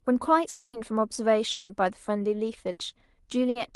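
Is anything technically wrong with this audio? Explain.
Yes. Four gaps break up this speech clip, two longer and two short.

From 0.49 to 0.76 s and again from 1.51 to 1.72 s there is what sounds like a long network dropout, likely caused by audio failing to arrive for a stretch. The receiver carries the last sound on as a fading buzz or hiss for about 240 ms and then 180 ms. The first gap ends in a brief silence of about 20 ms, the second in none, and in both the speech resumes further on with that part lost. These gaps are longer than a burst.

At 2.71 to 2.80 s and 3.49 to 3.58 s there is a burst of packet loss. About 60 ms of audio is missing each time. The receiver holds the last sound briefly and turns it down, so the listener hears a short buzz or fading hiss before the speech jumps ahead. The call codec path itself, Opus with the top end limited to about 12 kHz, is heard as its usual coding noise and that band limit.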